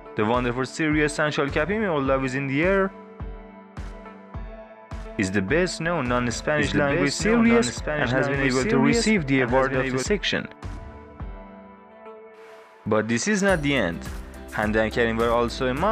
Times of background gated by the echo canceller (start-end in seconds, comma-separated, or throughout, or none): none